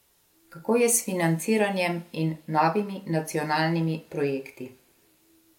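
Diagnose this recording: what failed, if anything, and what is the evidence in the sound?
Nothing failed in this recording, and the sound shows no evidence of a fault at any stage of the chain.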